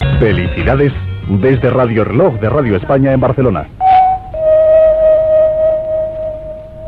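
No technical faults can be heard anywhere in the audio, and the signal stays steady and intact throughout.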